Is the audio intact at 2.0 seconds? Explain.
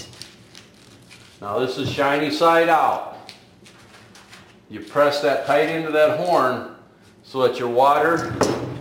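No. Sample clock jitter runs throughout, including 2.0 seconds. The converter's timing wanders by a few microseconds, adding roughness about 30 dB below loud, bright passages.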